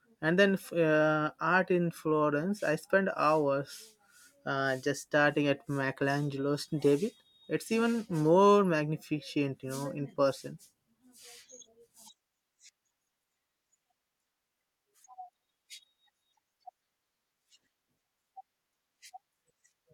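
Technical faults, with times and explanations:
No technical faults can be heard in this recording.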